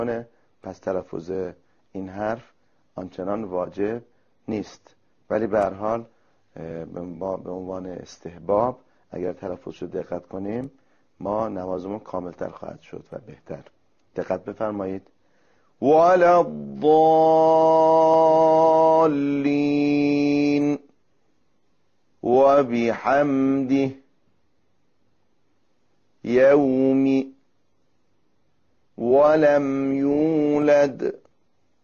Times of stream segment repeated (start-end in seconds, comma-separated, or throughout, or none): none